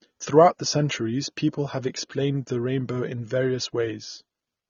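Low-bitrate AAC compression is the likely cause throughout this speech: nothing survives above 6.9 kHz, leaving it dull, with plainly audible warbling, fizzy smearing on sibilants, consistent with roughly 24 kbps AAC-LC.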